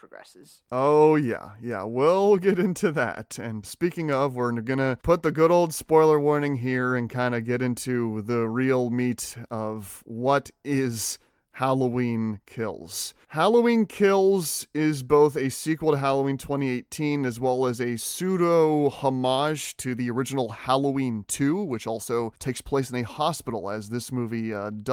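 No technical faults can be heard anywhere in this recording.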